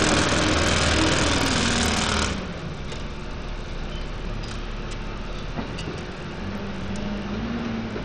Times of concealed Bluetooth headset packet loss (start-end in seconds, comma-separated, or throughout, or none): none